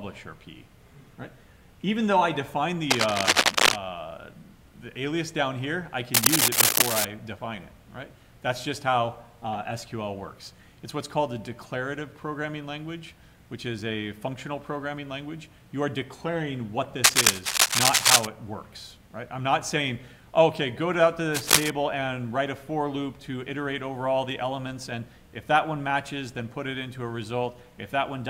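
Cable scratch noise appears four times: 2.90 to 3.76 s, 6.14 to 7.05 s, 17.04 to 18.26 s, and 21.34 to 21.70 s. Each burst is a dense, ragged rustle laid over the sound, rising well above it, with the third markedly louder than the rest. The likely cause is a worn cable, connector or control being moved, so that its contact resistance jumps about erratically and injects irregular noise into the signal.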